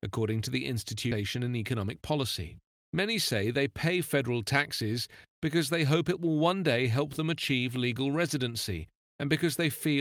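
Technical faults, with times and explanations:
1.11–1.13 s, skip ahead: right after "according to the", playback jumps forward, dropping roughly 0.7 s of speech with no gap inserted, so the two sides butt together abruptly. The waveform shows a sudden envelope discontinuity; the spectrogram shows harmonics and formants changing instantly at a vertical seam.
1.75–2.18 s, jitter buffer speed-up: an overfull buffer was drained by repeatedly cutting short pitch-period pieces, about 50 ms in total, so speech runs at 109% speed with unchanged pitch and sounds briefly hurried. The spectrogram shows compressed syllable timing while harmonic spacing stays steady.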